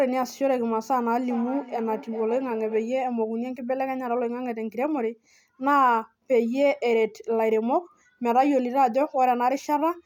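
From 1.24 to 3.07 s the speech returns about every 0.4 s, thin and ringing, peaking about 16 dB down: feedback echo between two devices sharing one room.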